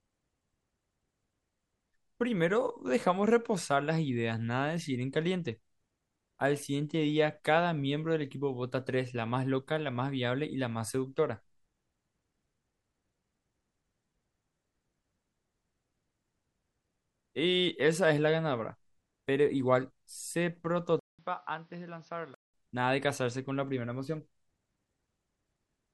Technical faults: input switched to a poorer device

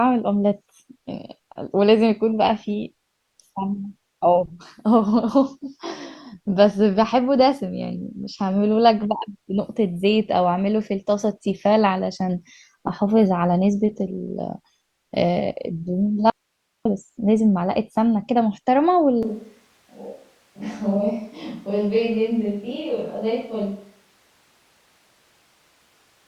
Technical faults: audio dropout to a faint residue; switch to a distant microphone

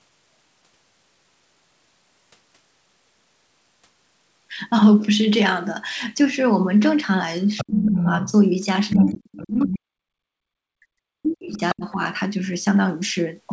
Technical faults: other side's voice leaking through; speech suppressed in double talk

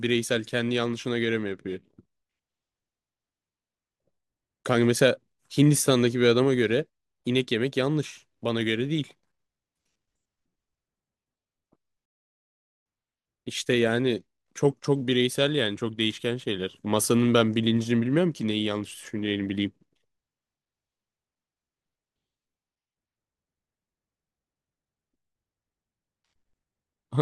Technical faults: one channel inverted

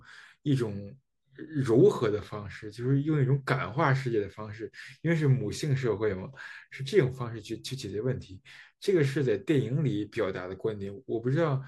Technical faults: none

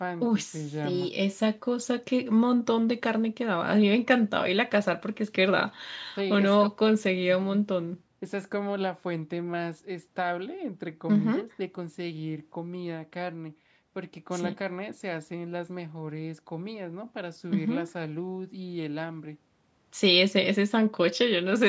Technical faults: none

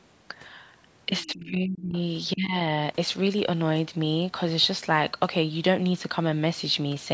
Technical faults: speech suppressed in double talk; other side's voice leaking through

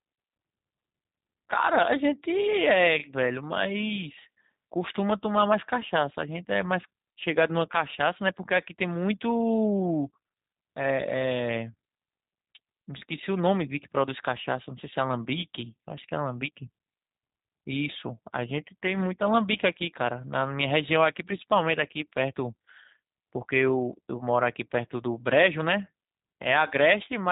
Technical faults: G.729 codec

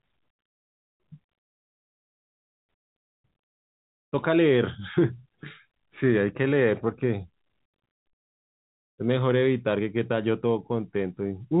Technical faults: none

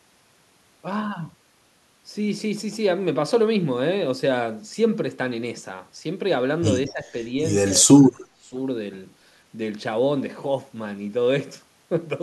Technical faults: speech suppressed in double talk

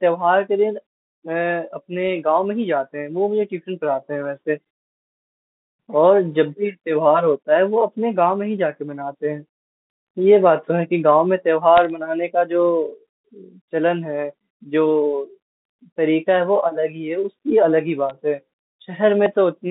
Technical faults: bit errors on a digital phone line

